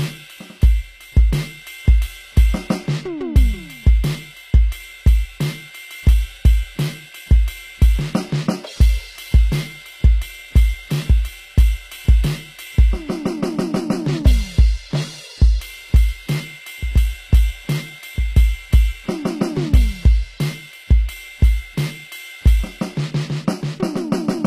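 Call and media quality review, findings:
Likely HE-AAC compression, whole clip: only the lower spectrum is truly coded; treble is rebuilt by copying lower bands upward. Damage plainly audible, fitting roughly 24 kbps. Misaligned harmonics; cymbals gritty, metallic; nothing above 15.5 kHz.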